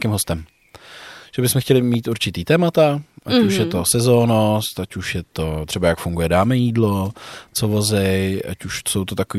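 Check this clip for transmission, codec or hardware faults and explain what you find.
One fault: a loud pop at 1.94 to 1.96 s, between "že bychom chtěli" and "určitý témata ať". A single sharp pulse, likely a voltage spike from a switch, plug or static, rises a few decibels above the speech, which continues uninterrupted underneath, unlike a dropout.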